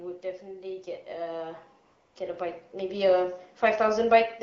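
From 0.21 s to 3.47 s the level climbs steadily by about 11 dB. This is automatic gain rising: the gain control judged the input too quiet and kept turning it up over roughly three seconds. Because the gain acts on the whole signal, the speech and the background swell together. The result is a gradual lift in loudness and noise floor rather than a step, and the later part of the clip sits noticeably hotter than the start.

Partway through that rise, from 1.85 s to 2.15 s, there is a 300 ms stretch of AMR comfort noise. The sending phone classed this moment as silence and stopped transmitting speech frames, so the receiver filled the gap with synthetic noise built from a rough estimate of the background's level and spectrum. The real background drops out and is replaced by a smooth, uniform hiss. It switches in and out abruptly at both edges. The wideband AMR coding underneath shows only light damage, consistent with a rate around 12.65 kbit/s.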